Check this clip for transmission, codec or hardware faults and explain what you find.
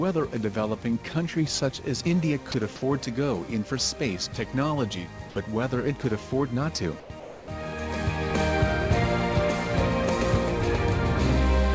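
Four short dropouts, each of the kind a voice detector produces, occur at 2.52–2.54 s, 5.30–5.36 s, 7.00–7.10 s and 7.20–7.48 s. The sender's detector likely classed quiet passages as background and stopped transmitting, and the receiver filled each gap with comfort noise. The sound gives way briefly to flat, steady noise and returns when the detector retriggers. The last gap is the longest, at about 230 ms of missing sound. The band ends at 8 kHz, which fits a G.722 wideband call path.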